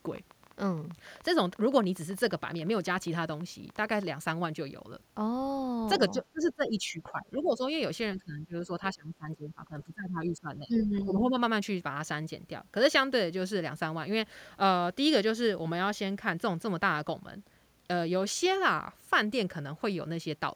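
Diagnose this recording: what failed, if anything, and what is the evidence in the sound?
Sample clock jitter at the converter leaves a faint roughness about 40 dB below the speech, growing on loud, bright passages. The clock timing wanders randomly, roughly 1.5 microseconds.

A train of clicks runs from 0.07 to 4.08 s, around fifty irregular pops near speech level, about 12.8 per second, likely interference in the analogue wiring or interface.

Speech suppressed in double talk, from call processing: level dips around 15 dB between 6.1 and 7.62 s, then around 20 dB between 8.16 and 11.35 s. The echo canceller likely ducked this talker.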